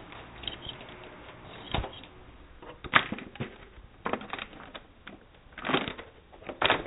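No technical faults can be heard in these everyday sounds. They come through a WebRTC call path whose cut-off at 4 kHz fits a narrowband telephone codec such as G.711.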